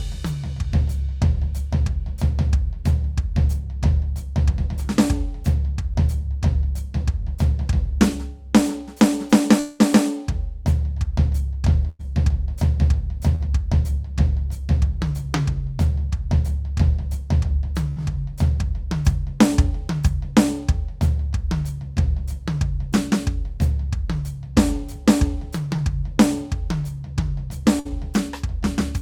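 At 9.59 s the music stops moving forward until 9.81 s. For about 0.2 s the last sound is held and stretched into a fading buzz, with no true silence. The music then resumes further on, and that fifth of a second never returns. This is a long network dropout. The likely cause is a stall in arriving audio, with the receiver covering the whole hole by continuing what it last had.

Four bursts of packet loss follow. At 11.89 to 12.01 s about 100 ms is lost. At 13.35 to 13.48 s about 40 ms is lost, and the music then jumps slightly ahead. At 17.90 to 17.98 s about 60 ms is lost. At 27.80 to 27.91 s another 60 ms is lost, and the music lands slightly late. Each time the last sound is held and faded as a brief buzz or hiss. The music picks up past the gap.

At 25.76 to 25.80 s there is short concealed packet loss. About 20 ms failed to reach the decoder in time. The receiver extended the preceding sound and blended back into the real music. 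It comes across as a tiny smear or wobble rather than a gap.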